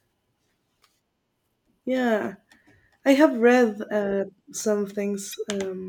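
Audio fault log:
5.29–5.35 s, damaged data in a compressed stream: just after "have read uh some", corrupted bytes make the decoder misread the frame and lose sync. It hunts for the next valid frame header, producing a brief glitch in the speech.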